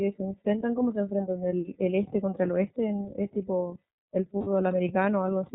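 From the start, the speech carries the character of the iLBC codec, and the damage is plainly audible. The band stops at 4 kHz, so the spectrogram shows an empty region above that line for the whole clip. The narrowband sound and the slightly rough, synthetic grain point to iLBC's 30 ms frame mode at about 13.3 kbps. Each frame's excitation is coded on its own, which leaves the voice intelligible but coarse.

From 4.38 to 4.47 s, lost iLBC frames interrupt the speech for about 90 ms, which fits three consecutive lost 30 ms frames. The decoder filled the hole by repeating the last pitch cycle mixed with noise. The gap is heard as a held, faintly buzzy vowel. On a spectrogram, the harmonics run flat and smear into noise before the normal pattern returns. In the waveform, the same few cycles repeat. Because each iLBC frame stands alone, the voice is right again almost at once after 4.47 s.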